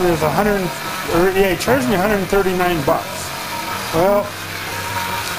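From start to finish the sound carries a metallic buzz, with added tones clustered around its own frequencies, because its level pulses by about 11 dB around 400 times a second. This is overlap-add ripple: the audio was split into short windowed frames and rebuilt with an overlap whose windows do not add up to a constant gain. Each frame boundary therefore brings a dip or swell, and at this rate the pulsing is heard as buzz rather than tremolo.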